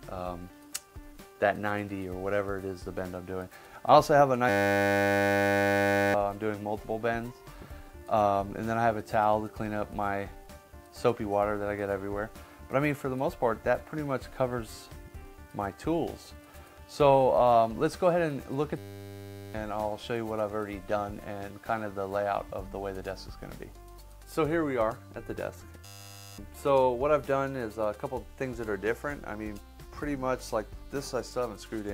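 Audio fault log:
4.49–6.14 s, 18.78–19.54 s, 25.85–26.38 s: system hang loop. The system froze, the hardware kept replaying one 10 ms slice, so you hear a flat 100 Hz buzz, losing roughly 1.5, 0.7 and 0.5 s.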